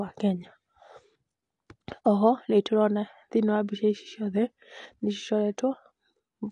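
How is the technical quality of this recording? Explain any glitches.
The recording has one clear problem running through the whole clip. AAC compression at a low bitrate is the likely cause: the encoder discards high frequencies and coarsely quantises the rest, which fits roughly 32 kbps AAC-LC. Nothing survives above 9.8 kHz, so the speech sounds dull, with smeared, warbling, fizzy texture on sustained sounds and sibilants.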